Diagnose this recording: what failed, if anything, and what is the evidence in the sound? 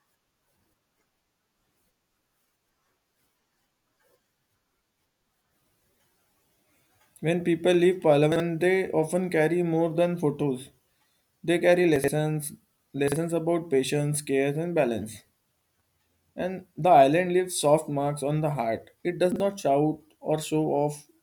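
The failure is chunks out of order, at the buffer or packet-delivery stage. Short jumbled moments occur at 8.32–8.40 s, between "people leave" and "they often carry more", at 11.96–12.08 s, at 13.08–13.16 s just before "about patience care and", and at 19.32–19.40 s. Each time a 40 ms block arrives late and plays after the block meant to follow it, two blocks late at 11.96 s. Nothing is lost, but the wrong order creates three hard joins, heard as a garbled moment.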